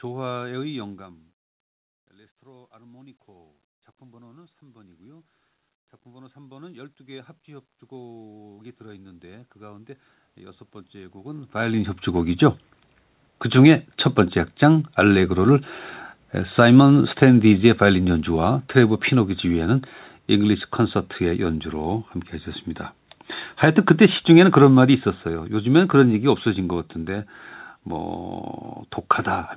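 Speech heard over a narrowband call path, with nothing above 4 kHz, which fits G.711 mu-law at 64 kbps. The first fault is automatic gain rising, from 2.1 to 12.47 s. The talker moves away around 1 s, and the input drops by about 21 dB. The gain control answers by slowly raising its gain about 19 dB. Voice and room noise swell together over ten seconds. The talker moves again near 11 s. Automatic gain falling follows twice, from 16.44 to 21.53 s and from 23.96 to 26.4 s. The control judges the level too loud, or its background noise too strong, and lowers its gain, first by about 5 dB, then by about 3 dB. Each time the voice and its background sink together.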